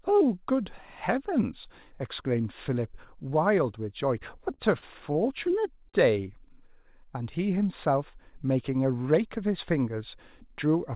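Speech over a call link, with nothing above 4 kHz, which fits G.711 mu-law. Four short stalls from late packets occur at 4.54, 4.78, 5.12 and 5.89 s. Each holds sound for 28 to 44 ms while the jitter buffer waits.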